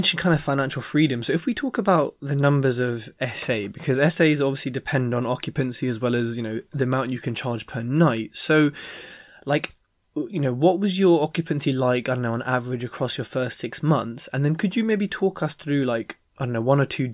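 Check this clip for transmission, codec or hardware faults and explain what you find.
No faults turn up in this clip.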